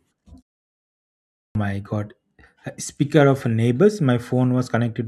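Clipped start after a pause at 1.26 s: after a 0.92 s silence, the dozing output wakes late, swallowing 0.29 s, so speech begins abruptly.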